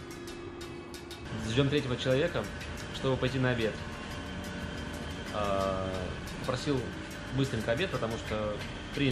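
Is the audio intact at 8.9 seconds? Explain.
Yes, the audio is intact at 8.9 seconds, with nothing breaking up, dropping out or distorting at that point.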